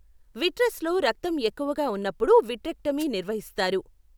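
At 2.98 to 3.05 s there's a wireless microphone noise hit: the FM signal fades briefly, and receiver noise surges through as a quick swish of static over the speech.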